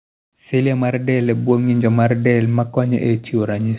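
From 0.64 to 1.81 s you can hear automatic gain rising: the gain control decides the input is too quiet and keeps nudging its gain up, about 4 dB over that stretch. Because it's the whole signal being lifted, the speech and the background noise swell together, a slow, steady push in level rather than a jump, settling just before "mar del ma". Through all of it the sound stays band-limited, with nothing above 4 kHz, which fits a narrowband call codec like G.711.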